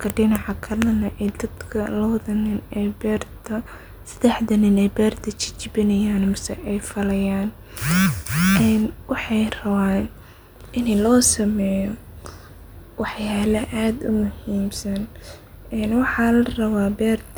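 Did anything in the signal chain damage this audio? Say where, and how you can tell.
No, nothing in this speech recording points to damage at any stage of the chain, so there's nothing to track down here.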